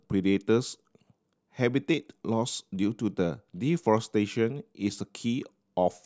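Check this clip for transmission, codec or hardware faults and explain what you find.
Listening through the speech, nothing stood out as a fault.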